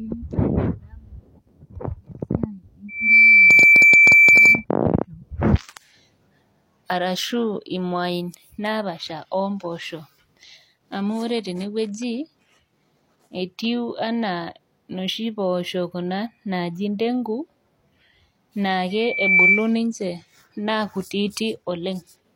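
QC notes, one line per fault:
2.88–4.65 s and 18.90–19.71 s, loudspeaker feedback squeal: a steady 2.3 kHz tone swells in within half a second and rides well above the speech, quieter the second time. The microphone is hearing its own loudspeaker, and the loop gain exceeds one at that frequency.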